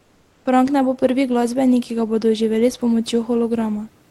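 From 0.00 to 0.45 s the opening pause carries comfort noise in place of the background. Rather than the real room noise, which sits about 40 dB below the loudest speech, a steady, featureless hiss fills the gap, about 3 dB quieter than the genuine background. This is likely Opus discontinuous transmission: while the sender's voice detector judged the input silent, it stopped sending audio, and the receiver synthesised roughly shaped noise until speech resumed.

At 0.43 to 0.45 s the speech onset is clipped by the voice detector. About 20 ms at the start of the first sound is missing, so it begins abruptly with no soft lead-in, and the synthetic noise runs right up to the cut. The likely cause is the same DTX voice detector reacting late to speech, leaving the first moments untransmitted and covered by comfort noise. The call codec's band limit near 12 kHz applies throughout.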